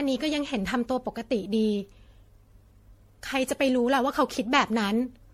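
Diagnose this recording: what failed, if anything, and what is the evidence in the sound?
Throughout the speech the sound is swirly and hollow, with smeared consonant attacks and a warbling noise floor, and nothing is present above 16.5 kHz. This is generation loss at the codec stage, likely from around ten successive MP3 encodes at a rate that fits 64 kbit/s. Each re-encode quantises on a shifted frame grid, so the holes and noise from earlier passes build up beyond what a single encode at that bitrate would leave.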